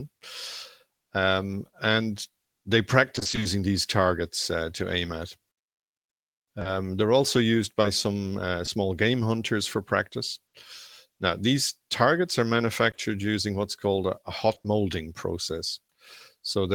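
From 3.15 to 3.47 s there is repeated packet loss, with a robotic sound. Eight short gaps, none longer than 20 ms, hit in quick succession. Each is filled by stretching the previous sound, so half this stretch is patched. It sounds choppy.

Scattered short gaps follow from 6.59 to 8.69 s. About four brief holes, each up to 20 ms, are spread across the stretch. Each is covered by continuing the last sound. They come through as small ticks and hiccups in otherwise clear audio.

At 10.47 s comes a burst of packet loss lasting 60 ms. The receiver holds the last sound and lets it fade over the gap. A short buzz or hiss replaces the missing part. The sound then picks up again at 10.55 s.

More scattered short gaps occur from 12.91 to 14.66 s. About five holes of up to 20 ms are patched the same way. A sliver of audio also drops out entirely. The result is a few quick smears and skips.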